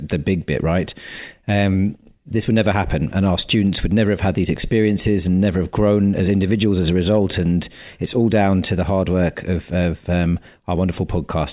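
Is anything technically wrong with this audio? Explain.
No, nothing in this speech recording points to a technical fault. There is nothing here to report.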